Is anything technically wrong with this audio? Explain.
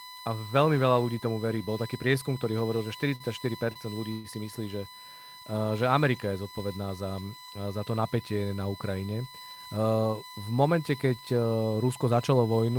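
Yes. This speech clip has a constant USB whine and several jitter-buffer faults: two short stalls, a call audio freeze and a jitter buffer speed-up.

USB whine runs through the whole clip. It is a fixed-pitch tone at 1 kHz with multiples, strongest at 4 kHz, roughly 20 dB below the speech. Current drawn by the USB bus in 1 ms frames is leaking into the audio through power or ground, so the whine repeats 1000 times a second. On a spectrogram it shows as thin, perfectly straight horizontal lines at 1 kHz spacing, with the 4 kHz line brightest, continuing through pauses where the speech stops.

A short stall from a late packet occurs at 3.15 to 3.23 s and again at 3.73 to 3.79 s, just before "ľudí si". A packet was not ready when due and the jitter buffer ran empty. The receiver stretched the last sound by 48 ms and 27 ms respectively, then resumed from the same point. Nothing is lost, but a sound is held too long, with a buzz or dip. 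On a waveform the stretch appears as repeated identical cycles. On a spectrogram the pattern freezes briefly.

A call audio freeze spans 4.12 to 4.27 s. The last sound is carried on for 127 ms as a fading buzz or hiss, never reaching silence, and then the speech continues where it left off with nothing missing. The likely cause is packets held up in transit, leaving the jitter buffer empty. A spectrogram shows a smeared band that fades without a clean gap, and the waveform shows a decaying, repetitive tail.

A jitter buffer speed-up runs from 9.26 to 9.99 s. The buffer held more audio than its target, so the receiver cut out short pieces of one or a few pitch periods many times in succession, about 150 ms in total. The speech plays at 116% speed with unchanged pitch and sounds hurried. On a spectrogram the harmonic spacing stays the same while syllables are compressed in time. The waveform looks packed together.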